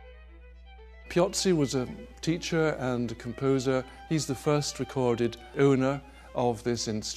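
Mains hum runs throughout the audio: a steady 60 Hz tone sitting roughly 25 dB below the signal, coupled in from the power line through a ground loop or nearby transformer.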